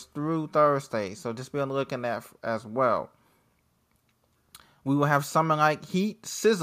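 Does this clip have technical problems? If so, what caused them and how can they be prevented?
No, there are no technical problems in this recording.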